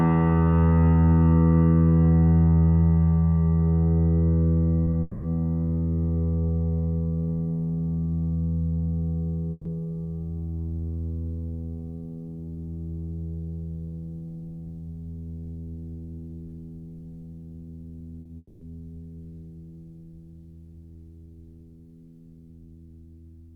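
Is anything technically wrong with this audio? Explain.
Yes, the music is interrupted several times by network packet loss and its concealment.

Short concealed packet loss occurs at 4.85–4.89 s, 4.91–4.95 s, 18.21–18.27 s and 18.27–18.31 s. In each case 20 to 40 ms of audio missed the decoder, which extended the preceding sound and crossfaded back, leaving brief smears or wobbles.

A long network dropout occurs at 5.01–5.25 s and 18.37–18.63 s. The music turns into a sustained, fading continuation of the last sound for about 220 ms and 240 ms. The second event ends in about 20 ms of silence. The likely cause is a stretch of lost packets, and the music resumes with that section skipped.

A burst of packet loss occurs at 9.51–9.67 s. About 140 ms of consecutive data was lost or arrived too late, so the receiver held and faded the preceding sound before playback resumed further along, missing the intervening material.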